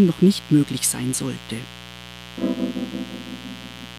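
Switching spikes from 60 Hz mains get into the signal path throughout, so a steady, raspy mains buzz sits roughly 20 dB below the sound.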